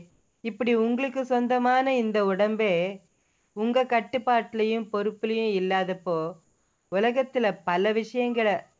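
Three pauses in the background, from 0.10 to 0.44 s, 3.08 to 3.56 s and 6.44 to 6.92 s, turn into steady, featureless hiss about 2, 4 and 3 dB quieter than the surrounding background, which otherwise sits about 45 dB below the loudest audio. This is likely comfort noise in place of the background, from a call sender pausing transmission during quiet stretches. Unlike a gate or dropout, the sound never falls silent. Its texture flattens, and the real background returns when the audio resumes. All of it lacks content above 8 kHz, as expected on this call path.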